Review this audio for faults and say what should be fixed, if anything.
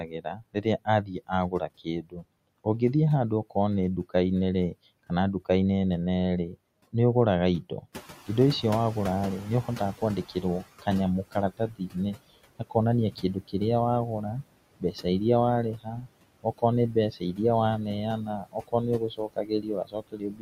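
Noise suppressor artifacts run throughout: steady noise is cut by about 21 dB frame by frame, leaving a residue that, unlike a speech cut, affects the background rather than the words.

Speech cut by the noise suppressor occurs at 0–2.66 s, 7.62–8.29 s, 9.64–13.54 s, 14.8–15.06 s, 15.75–17.39 s and 18.25–20.42 s. Soft speech is mistaken for noise and pulled down by up to about 22 dB, so endings sound swallowed rather than warbly.

Noise suppressor catching up happens from 7.92 to 10.65 s. When the room noise jumps about 12 dB near 8 s, the estimate lags for 2.73 s. The noise passes with only about 15 dB of reduction, then fades, which is how it differs from a steady room-noise change.

To prevent these faults, use gentler suppression with a faster-adapting noise estimate and better speech detection, and reduce room noise at the microphone.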